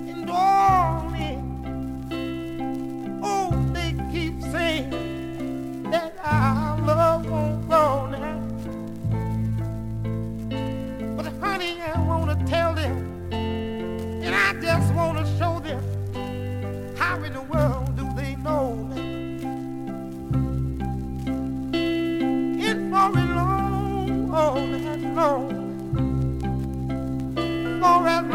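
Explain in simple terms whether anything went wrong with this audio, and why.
Between 4.71 and 7.98 seconds there is a fault called crude rate conversion. The audio's sample rate was changed, in a way that fits a switch from 44.1 kHz to 48 kHz, by simply repeating the nearest existing samples instead of smoothing properly. That shortcut leaves a faint, gritty fizz with tones that don't belong to the sound, clinging to the louder and brighter moments.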